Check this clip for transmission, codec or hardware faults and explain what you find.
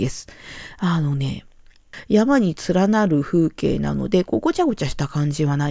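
No faults turn up anywhere in this clip.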